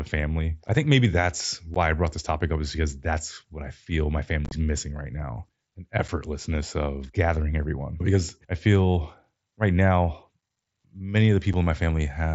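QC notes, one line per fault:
0.68, 1.74, 6.08 and 11.53 s: unconcealed Bluetooth headset packet loss. Quick holes of about 7.5 to 15 ms drop to silence with hard edges.
4.45–4.51 s: unconcealed Bluetooth headset packet loss. Several gaps totalling 45 ms over 60 ms, the longest 22.5 ms, chop the sound into a rough crackle.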